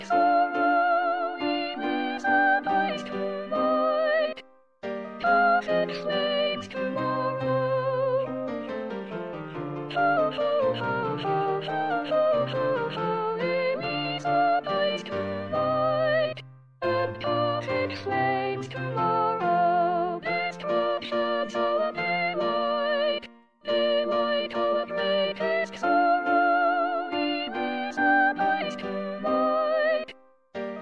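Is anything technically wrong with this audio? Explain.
No, nothing technically wrong is audible anywhere in this recording.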